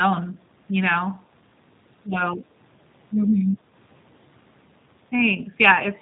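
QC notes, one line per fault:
Throughout, G.729 codec: speech is cut off above 4 kHz and sounds rough and synthetic because it is rebuilt from sparse pulses, which fits 8 kbit/s. A plain low-pass would sound dull but smooth.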